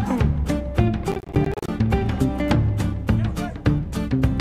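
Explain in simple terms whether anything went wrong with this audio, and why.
Between 1.12 and 1.68 seconds the audio breaks into a gritty, crackling burst: processor overload crackle. The computer handling the sound fell behind and kept missing the moment each small chunk of audio was due, leaving dozens of tiny silent holes in a row. The spacing of the crackle fits chunks of around 10 milliseconds. A single dropout would be one clean gap; here the gaps pile up into a rough, tearing texture that stops once the load eases.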